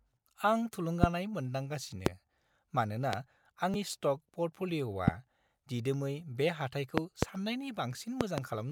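Loud pops land at 1.04–1.06, 2.06–2.09 and 3.13–3.16 s, sharp single clicks standing roughly 20 to 25 dB above the speech, which continues beneath them. A brief voltage pulse, likely from a switch, static or a driver glitch, was added to the signal. At 3.74 s, damaged data in the compressed stream produces a short blip: the decoder misread corrupted frames, lost sync and skipped ahead to the next valid header. A further single pop follows at 5.08–5.10 s. After "दिदोमै बे", two pops occur in quick succession between 6.98 and 7.25 s. A final pair comes between 8.21 and 8.40 s, each about 25 dB above the speech.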